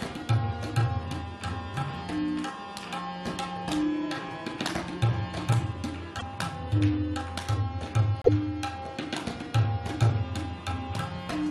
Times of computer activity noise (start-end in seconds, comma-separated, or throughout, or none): none